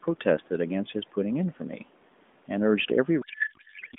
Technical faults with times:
3.22-3.99 codec payload misread

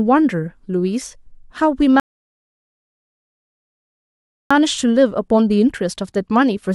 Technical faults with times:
2.00-4.51 rebuffering stall

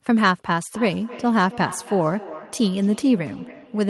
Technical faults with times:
0.74-3.89 feedback echo between two devices

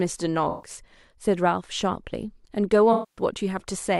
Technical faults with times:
0.49-0.70 AAC frame loss with concealment
2.93-3.22 AAC frame loss with concealment

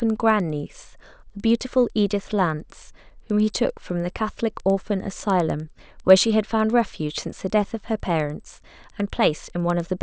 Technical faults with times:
0.00-10.03 resampler restarted on every block

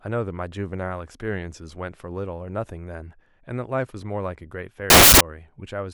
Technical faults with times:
4.90-5.21 samples built from the wrong bytes

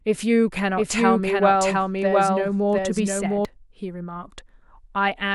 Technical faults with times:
0.77-3.45 doubled audio track

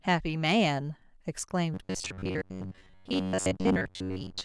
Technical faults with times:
1.74-4.44 robotic sound from repeated short buffers

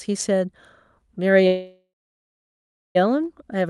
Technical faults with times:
1.47-2.97 call audio freeze

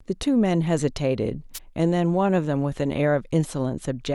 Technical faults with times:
1.54-1.59 wireless microphone noise hit

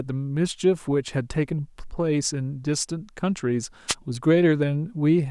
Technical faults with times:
3.88-3.95 wireless microphone noise hit

